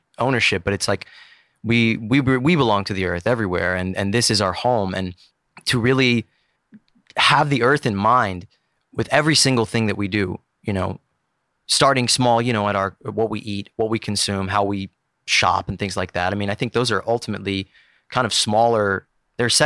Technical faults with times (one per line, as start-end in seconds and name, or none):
none